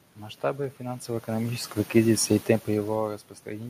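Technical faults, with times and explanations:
No technical faults in the signal chain; the room noise and the level shifts near 1 s and 2.5 s, where the talker moves relative to the microphone, are part of the recording.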